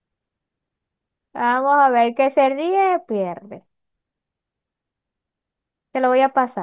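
No technical faults can be heard anywhere in this recording of speech.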